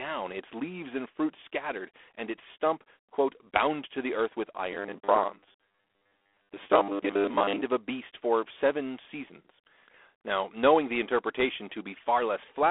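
Throughout the 13 seconds, the speech carries G.726 ADPCM coding damage. Each sample is sent as a small difference from an adaptive prediction, and the coarse steps leave a plainly audible rasping hiss that rises and falls with the speech level. This points to the 24 kbit/s mode. The line is band-limited to about 300 Hz to 3.5 kHz, with nothing above 3.8 kHz. Ordinary background noise would stay steady through pauses, but this hiss tracks the speech.

From 4.72 to 7.62 s, between "to the earth with" and "of a beast for", the speech turns into a robotic sound from repeated short buffers. It is a rigid, metallic buzz locked at 100 Hz that follows the original only loosely. The likely cause is new audio arriving too seldom, so the last chunk is replayed instead. The 100 Hz rate fits a 10 ms buffer, and roughly half the audio is repeats. Unlike the codec hiss, this buzz holds a fixed pitch and is confined to that stretch.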